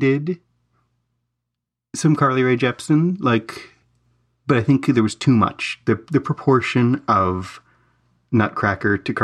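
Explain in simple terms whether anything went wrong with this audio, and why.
Nothing went wrong with this recording of speech: the signal stays steady and intact throughout, with no technical problems to be heard anywhere in it.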